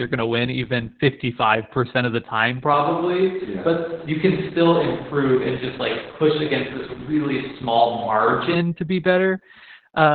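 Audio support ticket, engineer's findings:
Opus voice compression, whole clip. Speech muffled, hoarse, slightly robotic. Nothing above 4.4 kHz, so narrowband SILK mode. Excitation coded coarsely; damage heavy, which fits a bitrate near 8 kbps. Low-rate linear-prediction coding strips detail and band.

Distant-pickup sound, 2.74 s to 8.55 s. Voice turns roomy and hollow, thinner low end. Level barely changes. Room noise rises to roughly 25 dB under the speech. Onset and return both abrupt. Likely a switch to a distant microphone after the close mic dropped.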